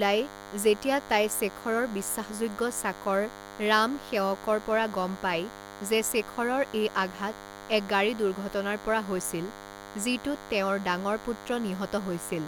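A thin, steady buzz sits under the speech for the whole clip, roughly 15 dB below the talker, with a rasping edge from its many harmonics. This is DECT cordless phone buzz: a nearby handset or base station pulses 100 times per second, and the audio circuit rectifies those radio bursts into sound.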